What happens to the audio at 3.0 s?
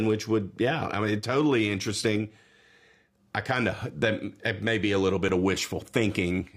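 Nothing goes wrong at 3.0 s; the audio plays through that moment intact, with no dropout, click or distortion.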